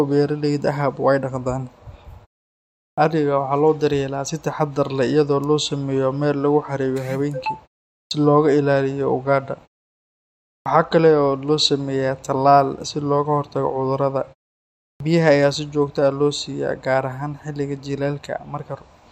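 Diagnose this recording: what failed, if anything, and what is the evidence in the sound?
The playback output sleeps during silence and wakes late, causing a clipped start after a pause at 2.91, 8.05, 10.59 and 14.94 s, each losing 60 to 70 ms.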